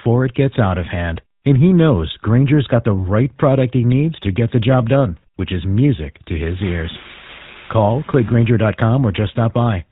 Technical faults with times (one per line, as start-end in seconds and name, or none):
0.00-9.91 GSM full-rate codec